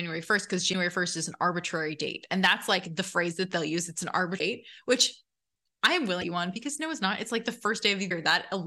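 At 0.72, 4.38, 6.21 (between "I am" and "you on") and 8.09 s, the speech skips forward with a chirp, noise burst or short hole of about 30 ms, roughly one 26.1 ms frame, likely a broken MP3 bit reservoir whose frames decode from another frame's bytes after a cut.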